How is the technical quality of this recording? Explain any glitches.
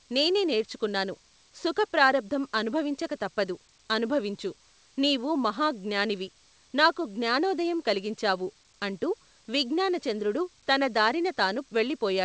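No glitches are audible in this speech, which has the band-limited character of a wideband call path with nothing above 8 kHz, consistent with G.722 at 64 kbps.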